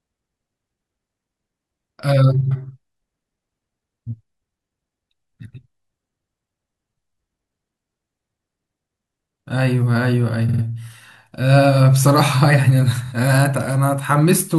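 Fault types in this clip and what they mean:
Repeated frames: a short run of coded audio plays again. The speech stutters at 10.48 s, a 48 ms block repeated three extra times, and at 13.05 s.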